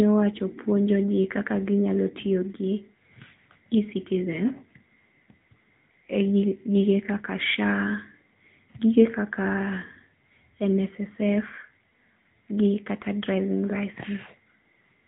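From start to finish the speech has that AMR narrowband mobile codec sound: nothing above about 3.8 kHz, and a buzzy, synthetic edge where the vocal-tract model runs short of pulses. The damage is plainly audible, even at an upper mode around 10.2 kbps.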